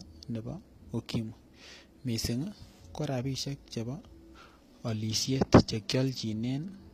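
Throughout, the speech keeps bright but synthetic-sounding treble with gritty, lispy s sounds. Unlike a dull low-pass, this points to likely HE-AAC compression near 24 kbps.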